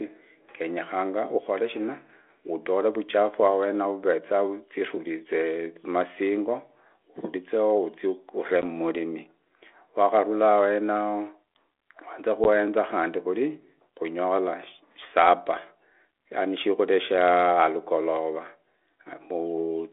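Speech clip on a telephone-band line: packet loss on an ADPCM call near 12.44 to 12.48 s drops about one packet, leaving a hard-edged 10 ms silent gap before the decoder's predictor and step size briefly resettle.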